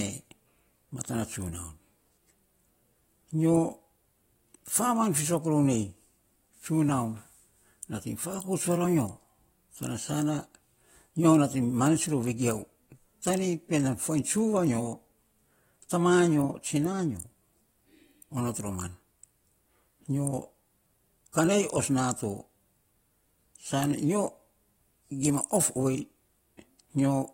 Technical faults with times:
15.89 pre-echo

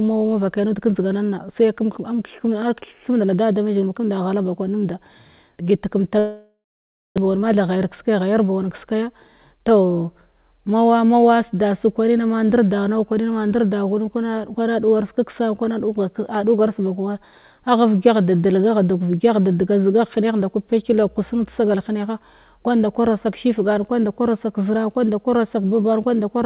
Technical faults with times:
6.19-7.19 long network dropout
7.27-9.03 jitter buffer speed-up

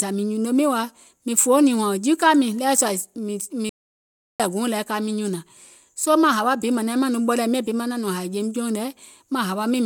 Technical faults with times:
3.69-4.40 playback stall

